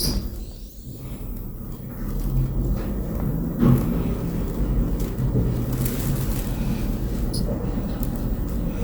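At 5.39 s and again at 7.39 s, compressed frames are skipped. The decoder drops whole blocks of the coded stream, and playback leaps forward. The first jump loses roughly 70 ms of sound, the second around a fifth of a second, which fits a few and then roughly ten 20 ms frames. On a waveform, the envelope shifts abruptly. A spectrogram shows a vertical seam where patterns fail to line up.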